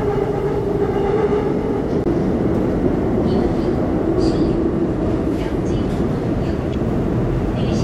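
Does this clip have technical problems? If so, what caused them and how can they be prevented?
Yes. There is damaged data in a compressed stream at 2.03 to 2.07 s and at 6.70 to 6.74 s. Each is a brief blip. Bad bytes made the decoder misread frames and lose sync. It then searched for the next valid frame header. Prevent this by using checksummed transfer and verifying file integrity before decoding.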